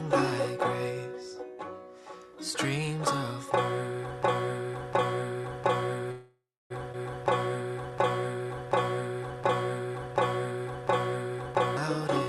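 A player or encoder that likely stalled has produced a broken-record loop from 4.23 s to 11.77 s: a 0.71 s fragment repeats exactly, back to back, ten times, so the audio that belonged in those seconds never plays. Inside that stretch, packets held up in transit likely drained the jitter buffer and caused a call audio freeze from 6.11 s to 6.72 s. The receiver stretches the last sound into a fading buzz or hiss over 0.59 s, including about 0.28 s of near silence, then resumes where it stopped. A skip ahead follows at 6.92 to 6.95 s, where a dropped stretch of roughly 0.4 s makes playback jump forward, joining the two sides with only a 12 ms bridge. From 7.24 s to 10.14 s, a jitter buffer slow-down rebuilds its reserve by repeating single pitch periods and bits of pauses, adding 81 ms. That runs the sound at 97% speed with unchanged pitch, drawing sounds out slightly. Everything passes through an Opus call path at 48 kbps whose high end stops near 12 kHz.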